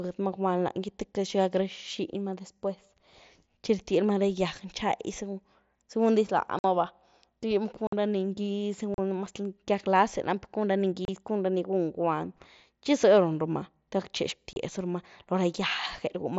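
Unconcealed Bluetooth headset packet loss breaks this speech clip at 6.59–6.64, 7.87–7.93, 8.94–8.99, 11.05–11.08 (just before "cun ra ni gun") and 14.53–14.56 s: holes of 30 to 52.5 ms with abrupt edges, where lost voice packets were replaced by silence or an idle pattern. The gap lengths fit runs of 7.5 ms frames, carried by the wideband mSBC headset codec, whose light graininess shows on loud sounds.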